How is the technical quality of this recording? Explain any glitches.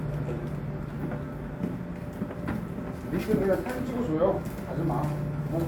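The signal carries no audible technical faults: the level stays steady, nothing drops out or breaks up, and the sound holds together without any interruption or distortion.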